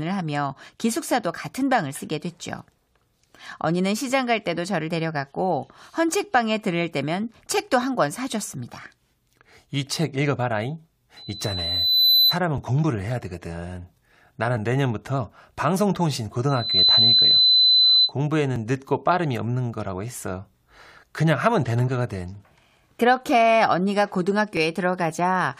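At 8.60 s the speech skips forward by a few milliseconds: an overlap between stream segments. Two segments claimed the same stretch of time, and the player discarded audio that was never actually duplicated, so the waveform jumps instead of falling silent as a dropout would. The spacing of these skips suggests segments about 2 s long.

From 11.16 to 12.39 s a loudspeaker feedback squeal appears. The microphone was hearing its own loudspeaker, and at 4 kHz the loop gain passed unity. The tone swells over roughly a second until it stands about 10 dB above the speech. That growth sets it apart from a steady interfering whistle.

Further segment-overlap skips follow at 12.58 s and 14.57 s. A second feedback squeal at the same 4 kHz runs from 16.49 to 18.12 s and builds faster, in roughly a third of a second. The last two overlaps fall at 18.56 s and 24.57 s, each again a tiny jump in the waveform rather than a gap.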